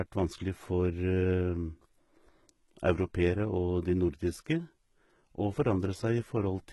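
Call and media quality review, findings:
Gritty, metallic treble on s sounds throughout; nothing above 11.8 kHz. Likely HE-AAC compression, heavy; replicated upper bands fit roughly 16 kbps.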